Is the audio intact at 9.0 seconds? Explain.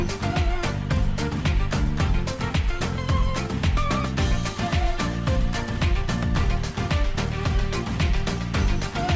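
Yes, the audio is intact at 9.0 seconds, with no dropout, click or distortion there, only the steady band limit of the call path, which leaves nothing above 8 kHz.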